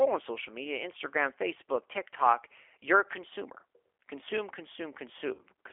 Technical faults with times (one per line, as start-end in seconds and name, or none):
0.00-5.73 G.729 codec
0.93-0.95 VoIP packet loss concealed by the speech codec
5.34-5.43 VoIP packet loss concealed by the speech codec